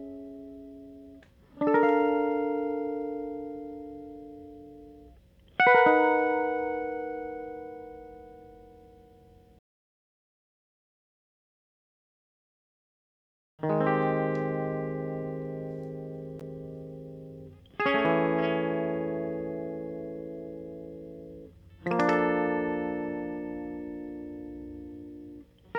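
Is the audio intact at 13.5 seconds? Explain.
Yes, at 13.5 seconds the music plays through intact, with no dropout, click, distortion or other fault at that moment.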